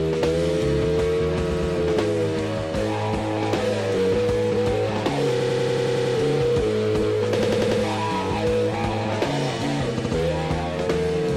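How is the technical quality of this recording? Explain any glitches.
The recording has a recurring glitch from repeated frames. A short block of compressed audio was delivered more than once, so the decoder replays the same slice and the sound stutters. At 1.50 s a 116 ms block plays twice more, adding 232 ms. From 5.40 to 6.14 s a 93 ms block loops eight extra times, the longest stutter, adding 743 ms. At 7.42 s an 86 ms block repeats four times, adding 383 ms. At 9.98 s a 70 ms block repeats twice, adding 139 ms.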